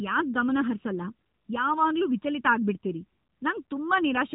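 From the start of the speech and throughout, there is channel delay (comb filtering). One channel trails the other by under a millisecond, and summing them to mono cancels shared content in evenly spaced notches starting near 700 Hz. The hollow, phasey colour stays fixed rather than sweeping, which separates it from a flanger or a moving phase effect.

Across the whole clip there is also an AMR narrowband mobile codec sound. Nothing passes above 3.8 kHz, and the voice has a plainly buzzy, synthetic edge, which fits a low AMR-NB mode around 7.4 kbps. That vocoder buzz, rather than just a muffled top end, distinguishes it from a simple low-pass filter or telephone band-limiting.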